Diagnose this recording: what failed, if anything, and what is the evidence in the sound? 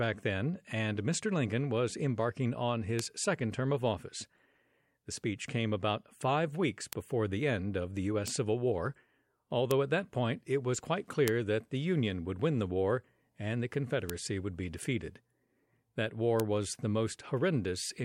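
A bit error spike fault in a digital link or storage stage: seven isolated broadband ticks at 2.99, 6.93, 8.28, 9.71, 11.28, 14.10 and 16.40 s, peaking at about -7 to -13 dBFS and unrelated to the speech. Flipped bits push one to three samples by a power of two before they return.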